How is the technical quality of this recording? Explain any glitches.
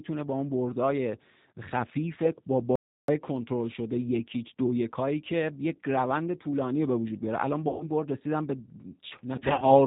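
The recording has plainly audible low-bitrate codec damage throughout, a short gap of silence, and two patches of concealed packet loss near the end.

G.729 codec, throughout: the speech has been squeezed to about 8 kbit/s, rebuilt from a vocal-tract filter, pitch predictor and a few pulses per frame. Nothing above 4 kHz survives, so the speech sounds muffled, slightly rough and synthetic.

Audio dropout to silence, 2.76 to 3.08 s: for about 330 ms the signal falls to silence with no room tone underneath, then resumes mid-flow. The input was most likely lost, through a link failure or stray mute, while silence kept being written.

VoIP packet loss concealed by the speech codec, 7.68 to 7.84 s and 9.36 to 9.70 s: the first loses 120 ms, which fits six 20 ms packets. The decoder stretches its last pitch and filter into a fading buzzy tone or coloured noise, and the speech stays weak afterwards. 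The second loses another 120 ms scattered across 300 ms, in bursts no longer than 40 ms, giving repeated brief concealment smears.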